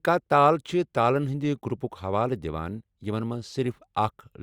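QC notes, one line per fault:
No faults found on this speech clip.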